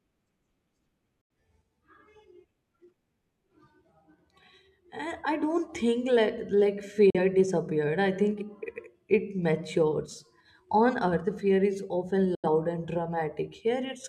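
The speech briefly drops into silence at 1.21 to 1.30 s, at 7.10 to 7.18 s just before "disappeared I", and at 12.35 to 12.49 s after "fear is often". Each is a digital broadcast dropout. The receiver muted with a 3 ms fade when frames failed, losing roughly 43 to 85 ms of programme, consistent with one or two lost frames.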